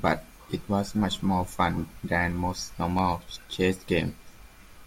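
Speech with periodic USB or driver dropouts: three ticks from 1.96 s to 4.02 s, every 1.02 s, each a skipped sliver under a millisecond. The strict spacing sets them apart from random clicks.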